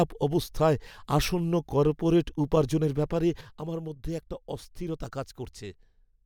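It's a speech clip with a sudden gain jump at 3.41 s, right after "আসন্ন কর্পোরেট উপার্জনের ব্যাপারে". The level drops by about 8 dB in one step and stays down to the end, and the background noise falls with the speech, so it's not a performer backing off. That instant step with no fade likely comes from a digital gain setting being applied without a ramp, so the change lands from one sample to the next.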